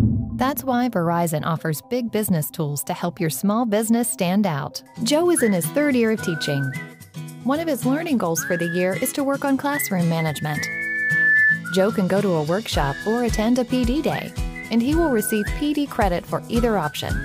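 Loudspeaker feedback squeal appears from 10.25 to 11.64 s. A microphone is picking up the loudspeaker it drives, and at 1.8 kHz the loop returns more signal than it sends out, so that frequency keeps reinforcing itself on every pass. It is heard as a pure tone that swells over roughly a second into a piercing squeal, ending up about 5 dB above the rest of the sound before it cuts off.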